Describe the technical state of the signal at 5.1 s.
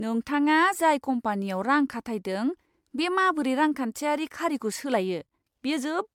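At 5.1 s the speech shows generation loss, present across the whole clip rather than at this moment alone. The likely cause is repeated MP3 encoding at 128 kbit/s, around seven passes, each re-quantising on a shifted frame grid so that noise and spectral holes pile up. The result sounds swirly, smeared and hollow beyond what that bitrate alone would give, with blurred attacks and nothing above 19.9 kHz.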